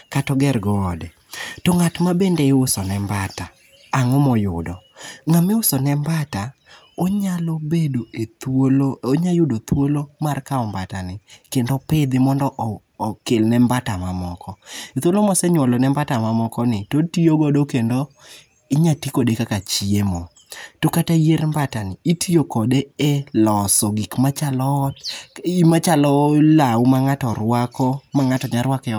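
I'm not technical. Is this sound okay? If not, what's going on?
No. Throughout the speech there is sample clock jitter. The clock that times the recording wobbles by about a millionth of a second. So each sample lands slightly off time. This adds a faint hiss or roughness on loud, bright sounds. It disappears in pauses.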